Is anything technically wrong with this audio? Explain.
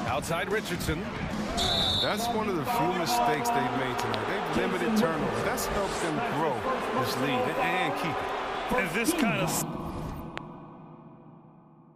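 Yes. Loud pops: paired pops at 3.15–3.36 s and 4.00–4.16 s, single pops at 9.21–9.23 s and 10.38–10.40 s, peaking about 10, 20, 15 and 15 dB above the sound. A voltage step or pulse from a plug, switch, static or driver glitch is the likely cause, shaped by the following circuitry into sharp pops over the continuing sound.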